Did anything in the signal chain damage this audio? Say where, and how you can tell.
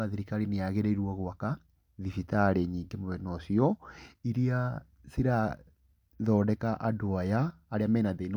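No, nothing damaged this audio.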